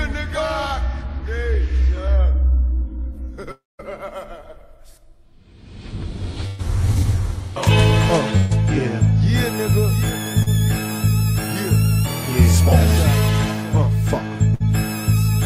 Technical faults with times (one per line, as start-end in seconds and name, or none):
3.51-3.81 long network dropout
6.47-6.61 burst of packet loss
8.37-8.52 burst of packet loss
10.42-10.48 short concealed packet loss
14.54-14.62 burst of packet loss